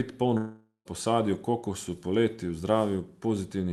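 From 0.37 s to 0.88 s the speech breaks off. The last sound is drawn out into a buzzy hiss that fades away, and the final 140 ms or so before recovery is near-silent. This is most likely a long network dropout: about 480 ms of audio never arrived, and the receiver filled the gap with synthesized sound instead. Speech resumes at "po sadju kokosu" with the lost part absent, still passing through a call codec whose top end stops near 12 kHz.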